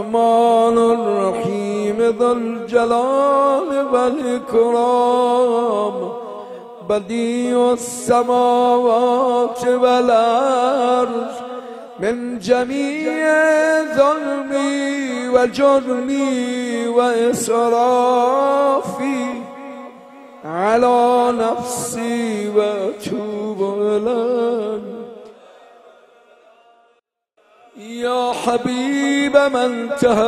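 No technical faults detected anywhere in the audio.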